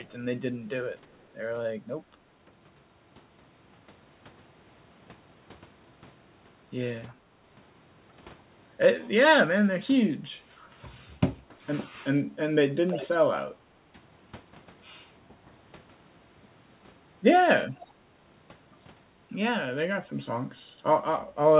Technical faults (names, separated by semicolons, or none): echo leak